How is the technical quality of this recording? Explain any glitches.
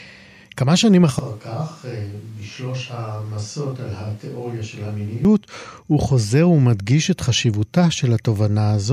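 The recording has one clear fault. Switch to a distant microphone, 1.19 to 5.25 s: a farther microphone likely replaced the lost close one, so speech abruptly turns hollow, roomy, bass-light, roughly 10 dB quieter and noisier, then snaps back.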